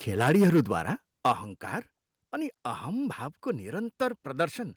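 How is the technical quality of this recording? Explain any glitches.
The recording has two kinds of glitch, both at the microphone stage, and they occur together twice early in the clip.

Microphone overload runs from 0.21 to 0.6 s and again from 1.25 to 1.31 s. The input is likely set too high, so peaks exceed the converter's limit by about 6 dB and about 5 dB, leaving a harsh crackle. On a waveform the tops look flattened; a spectrogram shows smeared high-frequency energy.

Microphone volume stepped down at 0.32 s and 1.32 s, the second just after distortion. Software likely reacted to the clipping by cutting input gain in one step, by about 2 dB and then about 7 dB, so the speech and background suddenly sound quieter. The waveform envelope drops abruptly there.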